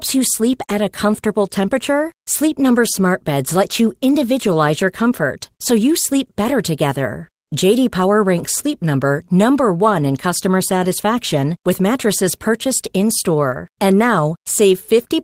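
Nothing stood out as a technical fault on listening to this speech recording.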